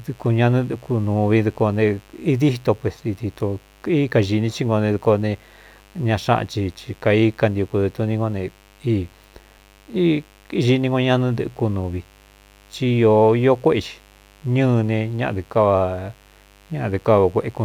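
Mains buzz runs throughout the speech, a steady raspy drone: switching spikes from a 50 Hz supply leak in, sitting roughly 30 dB below the speech.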